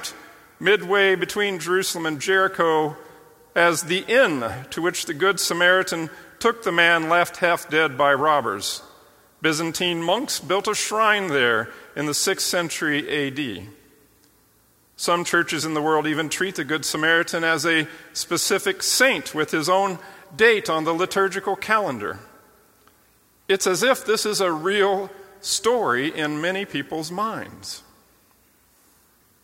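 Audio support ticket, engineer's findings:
Clock slip clicks, 0.17–29.40 s: faint regular ticks, about ten per second, across the whole sound. Likely two unsynced device clocks, around 200 ppm apart, each slip dropping or repeating one sample. Metronomic spacing separates this from irregular buffer-underrun dropouts.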